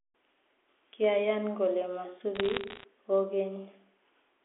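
From 2.35 to 2.84 s, bit errors on a digital phone line put a burst of sharp, isolated ticks over the speech. The audio is carried as G.711 A-law, band-limited to about 200 to 3400 Hz, and roughly one bit in two hundred arrives flipped. Each flip corrupts a single sample, and a flip in the sign or a high-order bit sends it leaping. Unlike packet loss, nothing drops out: the speech runs on unbroken beneath the crackle.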